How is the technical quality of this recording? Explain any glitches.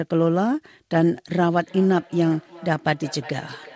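The speech has a feedback echo between two devices from 1.54 s to the end. Another device in the room replays the call, the mic catches it again, and repeats come back roughly every 0.4 s, thin and ringy, at about 21 dB below the voice.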